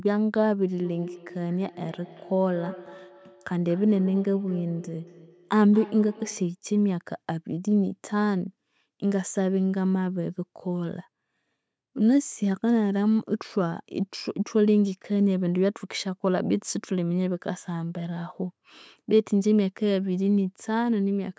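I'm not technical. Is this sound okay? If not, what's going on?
No. From 0.77 to 6.57 s there is a feedback echo between two devices. Two devices in the same room seem to be on one call, so one device's speaker plays back what the other's microphone sent, and that microphone picks it up again. Each device's echo cancelling only removes its own playback, so this loop gets through. The result is that each bit of speech comes back as a fainter repeat about a fifth of a second later.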